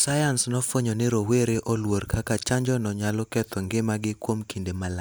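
Speech recording with no audible technical faults.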